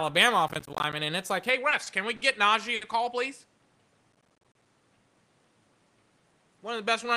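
From 0.48 to 0.95 s, processor overload crackle: roughly 10 ms buffers keep missing their deadlines, each leaving a hard-edged gap of silence. The result is gritty tearing rather than a single dropout. It returns from 4.13 to 4.66 s.

At 1.49 s the sound abruptly narrows to a smaller band and gains a faint new noise floor about 40 dB down, with no level jump or gap. This is most likely an input switched to a poorer device, not a filter, since the tone and background change together and stay that way to the end.

Short stalls from a late packet follow at 1.69, 1.83, 2.16 and 2.75 s, lasting 20, 30, 50 and 60 ms. Each one holds a sound too long, then resumes where it left off. Unlike the crackle, nothing is cut out.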